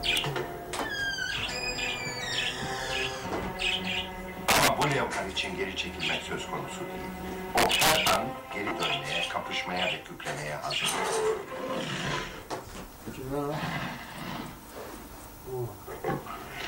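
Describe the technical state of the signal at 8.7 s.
Right around 8.7 s there's a short gap from lost LE Audio frames, running from about 8.68 to 8.71 s, so roughly 30 ms, which fits three 10 ms frames going missing over the Bluetooth link. The LC3 decoder covers the hole by replaying the last good spectrum with its phases scrambled by random signs. You hear a brief noisy smear where any tonal content should be, and then the signal picks up again.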